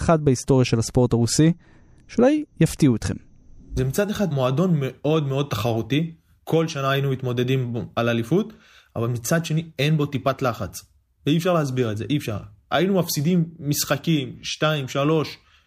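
Nothing in this speech recording stands out as a technical fault, so there's nothing to point to along its timeline.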